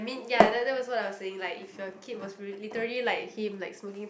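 No technical faults detected.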